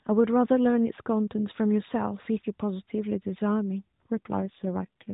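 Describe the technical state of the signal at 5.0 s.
An AMR rate drop spans 4.17 to 5.13 s, so 5.0 s falls inside it. The mobile link appears to have pushed the AMR narrowband codec down from its top mode, roughly 12.2 kbps, to something like its lowest, 4.75 kbps, spending the freed bits on error protection. The speech stays within the same 4 kHz band with no gap, but turns buzzier and more synthetic until the rate goes back up at 5.13 s.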